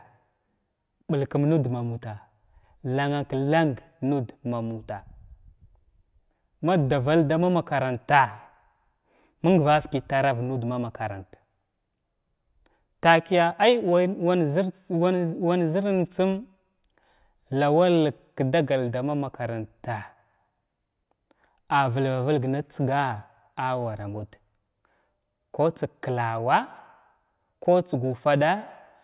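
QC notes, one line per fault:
No faults heard in this speech recording.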